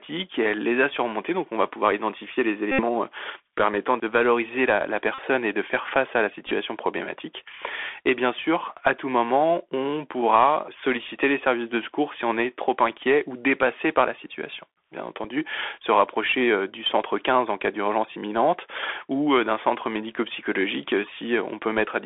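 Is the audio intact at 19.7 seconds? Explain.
No. At 19.7 s, as across the whole clip, the speech sounds narrow, held to about 300 Hz to 3.5 kHz, with scratchy s sounds and a granular hiss beneath. This is the Bluetooth CVSD headset codec, whose one-bit up-or-down steps at 64 kHz can't keep up with loud high sounds, so they distort.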